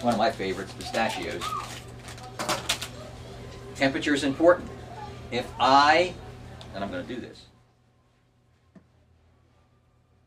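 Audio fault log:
No faults heard.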